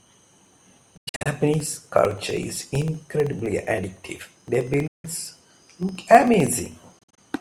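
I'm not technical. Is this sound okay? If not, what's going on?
No, there are two problems. Periodic USB or driver dropouts: from 0.07 to 7.30 s, a tiny 1 ms sliver drops to silence every 64 ms, giving a steady ticking under the speech.

There are also three short holes where the sound cuts out, at 0.97 to 1.26 s, 4.87 to 5.05 s and 6.99 to 7.19 s. The speech picks up further along, as if it had kept playing. That's likely a Bluetooth dropout, where packets didn't reach the headphones in time.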